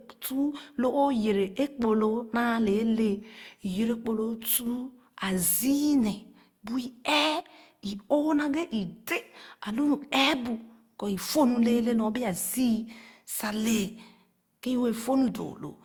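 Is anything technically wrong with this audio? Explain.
Yes, the speech carries two kinds of fault.

Generation loss runs through the whole clip. It is likely from the audio being passed through Opus at 64 kbit/s around four times. Each decode and re-encode quantises the signal again on a shifted frame grid, so noise and spectral gaps build up. The result sounds swirlier, more smeared and hollower than a single 64 kbit/s pass would, with softened attacks on consonants.

One channel drops out at 4.57–4.66 s, just after "kpor loo", and again at 7.40–7.48 s. Each gap lasts under a tenth of a second. The likely cause is one stereo channel briefly going missing before the mono sum. Material shared by both channels falls abruptly by about 6 dB, and anything present only in the lost channel vanishes. This is heard as a short, sudden dip in the sound.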